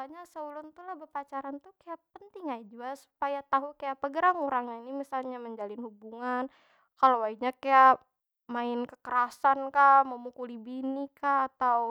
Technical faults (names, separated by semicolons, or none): none